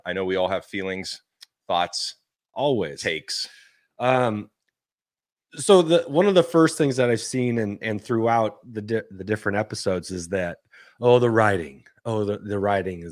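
No technical faults are audible.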